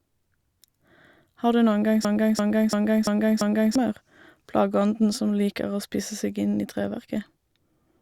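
From 2.05 s to 3.76 s the speech is caught in a system hang loop: the host or driver stalled while the audio hardware kept replaying the same ring buffer. A single 341 ms slice repeats exactly five times, at about 2.9 repeats per second, giving a rhythmic stutter of one identical fragment. The loop length fits a 16384-sample buffer at 48 kHz, and roughly one and a half seconds of real audio are lost.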